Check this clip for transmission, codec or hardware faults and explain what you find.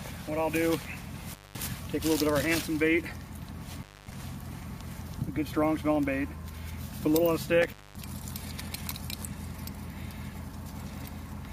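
There is one hardware fault, an intermittent contact, heard three times. Dropouts fall at 1.30 to 1.59 s, 3.72 to 4.18 s and 7.62 to 7.98 s. A loose plug or cable briefly breaks the signal path. The sound vanishes for about 0.20 to 0.24 s each time, with crackle at the edges and faint hiss in the gap.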